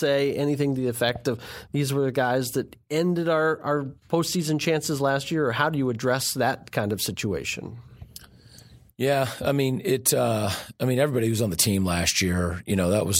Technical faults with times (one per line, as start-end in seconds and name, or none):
none